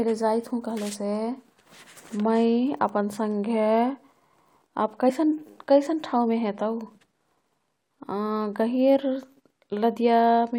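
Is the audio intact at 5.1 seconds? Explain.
No. At about 5.09 s, compressed frames are skipped. Roughly 20 ms of audio never plays, likely because damaged or missing frames were dropped by the decoder. The speech jumps ahead there.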